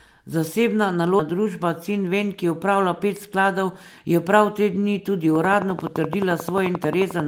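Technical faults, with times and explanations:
1.2 s, skip ahead: playback jumps forward with no gap filled, dropping roughly 0.4 s of speech, as if the buffer discarded a stretch while later audio was already waiting. Unlike a dropout, there is no silence; the two sides simply butt together.
1.31 to 3.37 s, jitter buffer speed-up: the speech runs about 6% fast while pitch stays the same, because the receiver trimmed short pitch-period pieces again and again, removing roughly 150 ms in total to shrink an overfull buffer. It differs from a skip in being gradual rather than one jump.
5.35 to 7.21 s, train of clicks: regular ticks at 11.4 per second, about 20 in all, peaking about 10 dB above the speech and audible in pauses too, likely from interference or a faulty connection. Their steady, near-identical shape separates them from random crackle.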